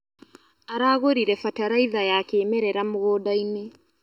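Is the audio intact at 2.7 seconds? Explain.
No. At 2.7 seconds the speech has the channel delay (comb filtering) heard throughout: one channel lags by under a millisecond, so mixing to mono cancels evenly spaced frequencies from around 700 Hz, leaving it hollow. Unlike a phaser, these notches never move.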